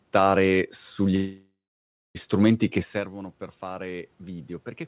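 At 1.16 s the audio stops moving forward. The last sound hangs on as a fading buzz or hiss, then about 0.59 s of silence. This is a call audio freeze, likely from delayed packets draining the jitter buffer. Sound resumes at 2.17 s on "strumenti che", nothing lost, just a one-second gap.

From 2.92 s, after "sugli strumenti che", the input drops by about 16 dB as the talker moves back. Automatic gain rising follows. The gain control climbs slowly to compensate. Voice and room noise swell together through to the end.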